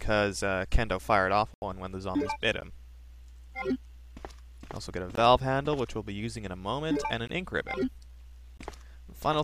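The audio drops out in blocks of digital silence at 1.54–1.62 s, 2.61 s, 5.15–5.17 s, 7.27–7.29 s and 8.57–8.59 s. Each gap cuts hard to silence and back. The 80 ms gap is a short hole. The 14 ms gap at 2.61 s is a tick. The output buffer was likely not filled in time.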